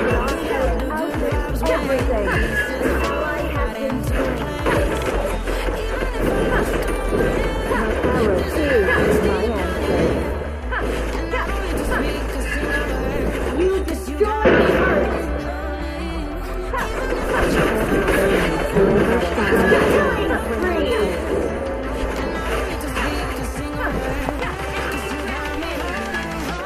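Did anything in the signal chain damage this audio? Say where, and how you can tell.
Yes. A loud pop, likely a voltage step from a plug, switch or static in the analogue wiring, strikes at 1.99 to 2.01 s as one sharp pulse about 10 dB above the sound. It returns at 24.29 to 24.42 s as two pops about 15 dB up. The sound carries on underneath both.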